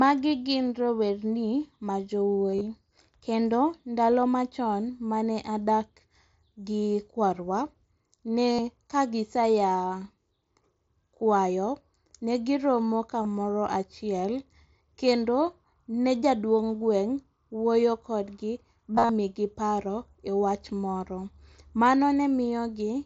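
Concealed Bluetooth headset packet loss hits this speech at 2.52–2.61 s, 8.53–8.59 s, 13.23 s after "ne giromo", and 18.95–19.09 s between "wuoyo kodgi" and "migi paro ewach moro". Lost headset packets were patched by repeating recent waveform, giving brief buzzy, level-held tones that end in a slight warble, unlike dropouts, which go silent, over the light graininess of the mSBC link.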